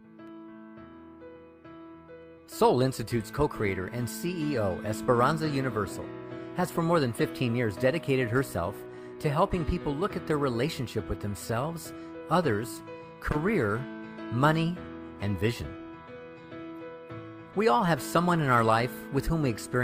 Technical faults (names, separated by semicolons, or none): none